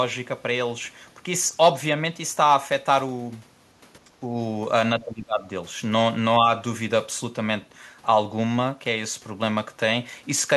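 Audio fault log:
4.07–4.30 s and 4.99–5.46 s: speech suppressed in double talk. Speech level dips briefly, by roughly 10 dB in the first stretch and about 20 dB in the second, likely an echo canceller treating overlapping far-end talk as echo and attenuating everything together.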